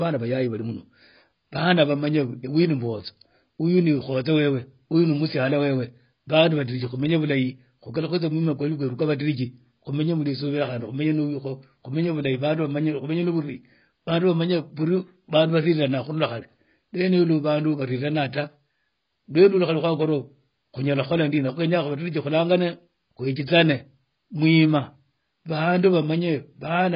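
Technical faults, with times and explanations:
Throughout, AAC compression: the speech sounds dull and smeared, with nothing above about 5.1 kHz and a watery, fizzy warble on sibilants and held sounds. The likely cause is heavy AAC-LC coding, where the encoder drops the top band to save bits and quantises each frame's remaining frequency lines so coarsely that parts of the spectrum go missing or turn to noise. The damage level fits a bitrate around 16 kbps.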